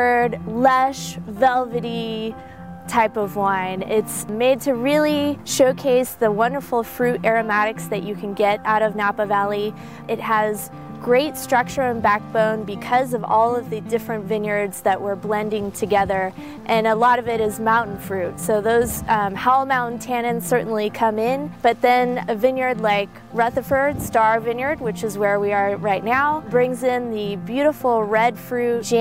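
Nothing in the audio stands out as a technical problem, so there's nothing here to flag.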